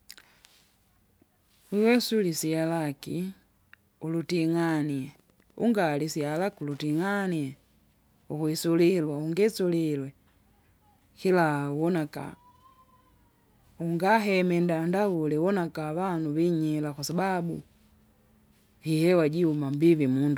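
Speech, with Wi-Fi interference from 4.62 to 7.11 s: faint ticking every 102.4 ms, roughly 40 dB down, as a nearby radio's beacon gets rectified by the audio circuit.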